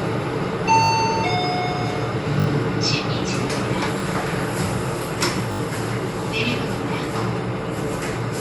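Repeated buffer at 0.84–0.9, 2.4–2.46, 4.0 and 5.52–5.6 s: audio arrived late, so the last roughly 20 ms block replayed, giving short hard-edged stutters with nothing skipped.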